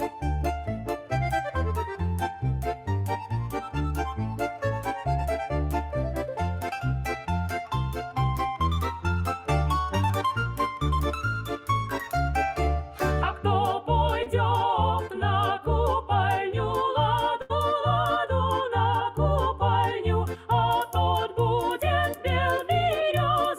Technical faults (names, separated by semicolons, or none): short concealed packet loss; burst of packet loss